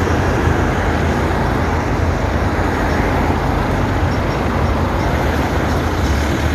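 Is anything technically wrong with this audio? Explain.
Yes. Compressed frames are skipped twice, at 2.39 s and 4.18 s. At each point whole frames never reach playback, so the audio jumps ahead, by about a tenth of a second at 2.39 s and about 150 ms at 4.18 s. That fits roughly five and seven 23.2 ms frames. Overlapping neighbour frames smear each join into a short blip rather than a click. A spectrogram shows an abrupt discontinuity with a faint vertical smudge. The waveform's envelope steps suddenly without a sharp spike.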